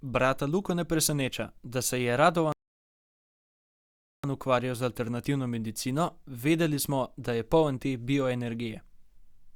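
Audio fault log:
2.52–4.24 s, rebuffering stall: playback halts when the downloaded audio runs out, leaving 1.71 s of dead silence, then the speech picks up exactly where it broke off with nothing missing. The waveform shows a flat line and the spectrogram a blank vertical gap.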